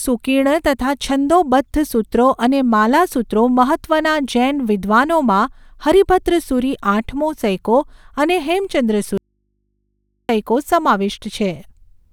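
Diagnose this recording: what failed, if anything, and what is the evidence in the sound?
An audio dropout to a faint residue runs from 9.18 to 10.29 s: the speech cuts off abruptly and, for about 1.1 s, only mains hum remains, about 55 dB below the signal. Hum from a live but open input points to an intermittent analogue connection as the likely cause, unlike a pause or fade.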